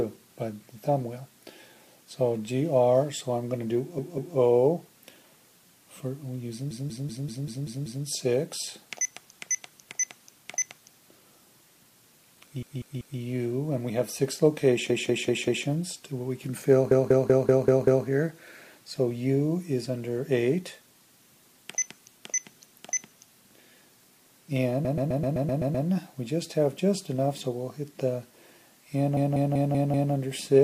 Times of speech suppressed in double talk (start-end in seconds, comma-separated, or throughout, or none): none